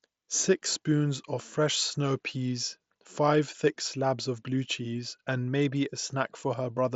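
No technical faults can be heard in this speech.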